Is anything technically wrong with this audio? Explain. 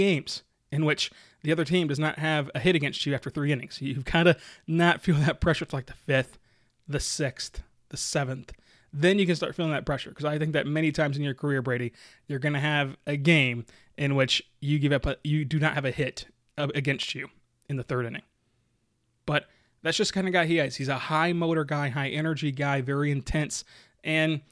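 No, nothing technically wrong can be heard here.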